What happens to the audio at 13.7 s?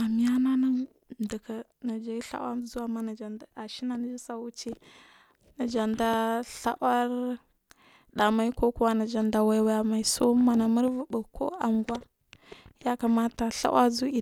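Nothing goes wrong at 13.7 s; the speech carries on cleanly through that moment with no dropout, click or distortion.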